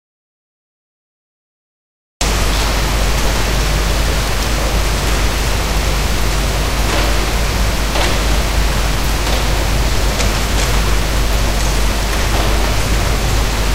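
From the very start until 2.21 s the clip is an audio dropout to silence: silence with no room tone at all, after which the sound enters abruptly. The input was likely lost, through a disconnected source or mute, while recording continued.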